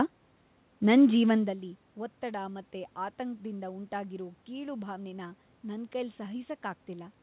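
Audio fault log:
No faults found: the room's background noise and the level shift at about 1.5 s as the talker moves are part of the recording, and the lack of content above 4 kHz fits a G.711 A-law call path at 64 kbps.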